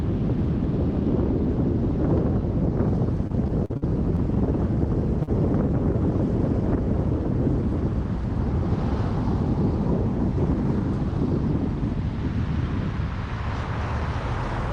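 Between 3.27 and 4.19 s the audio breaks up with repeated packet loss, giving a choppy, robotic texture. Six separate dropouts land in under a second. The longest is 45 ms, and about 160 ms of audio is missing in total. The receiver patches each hole by extending the preceding sound, and roughly 17 percent of that stretch is synthetic fill, so the result is a stuttering, choppy quality rather than clean silences. A single short concealed packet loss follows at 5.23 to 5.29 s. About 40 ms of audio did not arrive in time and was replaced with 43 ms of extrapolated signal, carried forward from the last pitch or as shaped noise, before crossfading back into the real stream. It is heard as a brief smear or wobble.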